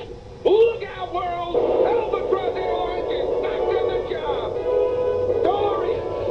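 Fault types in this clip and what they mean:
No audible faults turn up anywhere in this recording.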